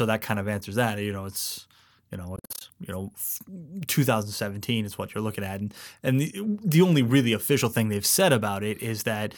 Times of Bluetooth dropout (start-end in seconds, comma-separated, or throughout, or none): 2.36-2.62